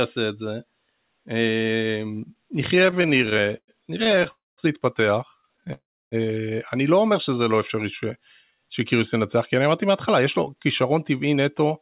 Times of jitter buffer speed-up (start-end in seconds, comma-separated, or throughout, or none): 10.55-11.81